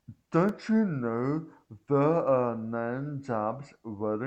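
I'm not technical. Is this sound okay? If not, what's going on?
No. At 0.49 s there is a block of digital silence in the speech. For about 2 ms the sound drops to complete nothing, then comes straight back. There is no gentle fade in or out, so the sound cuts off and returns abruptly. Because the gap is so short, you hear it as a small tick rather than a hole. It happens when the playback program fails to deliver sound in time and fills the gap with zeros.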